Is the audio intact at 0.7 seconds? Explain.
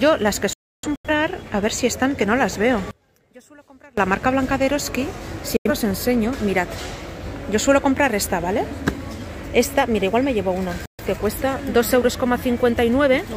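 No. At 0.7 seconds the audio falls inside a digital broadcast dropout running from 0.53 to 1.10 s. The receiver lost the signal or got frames that failed their checksum, so it muted until good frames arrived. The sound fades out within about 3 ms, leaving gaps. About 384 ms goes missing across roughly half a second, which fits nine lost frames. The longest hole lasts about 299 ms. Whatever was sent during the gaps is gone.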